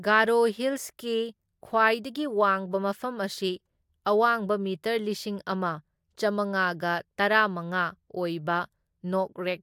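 No technical faults are audible.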